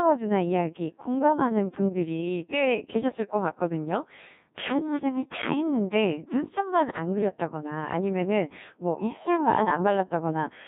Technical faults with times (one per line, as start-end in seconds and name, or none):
0.00-10.68 Codec 2 vocoder